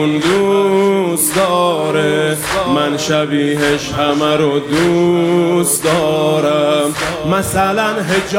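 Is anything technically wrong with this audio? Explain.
No, nothing stood out as technically wrong on listening to this audio.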